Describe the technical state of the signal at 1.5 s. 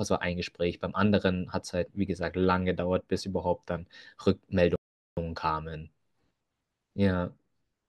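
At 1.5 s the speech signal is intact, with no technical fault present at that moment.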